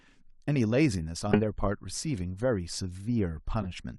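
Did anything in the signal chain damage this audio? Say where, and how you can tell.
Yes, a corrupt frame was decoded at the codec stage. Chirps, blips or noise bursts at 1.32–1.41 s (loud) and 3.62–3.66 s (faint) show damaged frames decoded with energy at the wrong frequencies.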